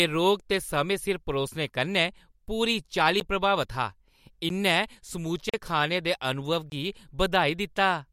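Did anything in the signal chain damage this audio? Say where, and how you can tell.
Yes. The damage happened at the driver or buffer stage, where a block of digital silence was written whenever the output buffer wasn't filled in time. The speech cuts straight to silence and back with no fade. There are short ticks at 3.20 s and 4.49 s (10.7 ms each), a 21 ms hole at 6.70–6.72 s and a 43 ms gap at 5.49–5.54 s. Because those lengths are multiples of one unit, they fit a 512-sample buffer underrunning.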